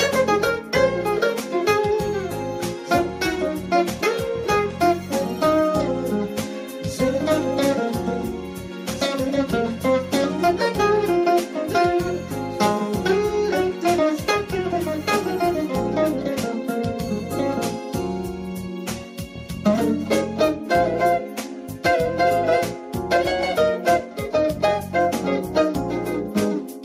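No technical faults can be heard anywhere in the audio. Nothing in it calls for a time mark or an explanation.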